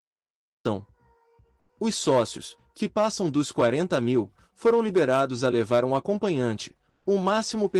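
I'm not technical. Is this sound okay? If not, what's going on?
No. There are two problems.

The first is a cut-off start. The clip is silent until 0.65 s, then the sound begins abruptly, partway through, with no natural build-up. The recording evidently started late and missed the beginning.

The second is comfort noise in place of the background, briefly, at 1.59 to 1.69 s and again at 6.89 to 7.05 s. In those moments the real background sound is replaced by a smooth, artificial noise. It is slightly louder the first time and noticeably quieter the second. The likely cause is the sending system pausing transmission during quiet moments, with the receiver filling in synthetic noise.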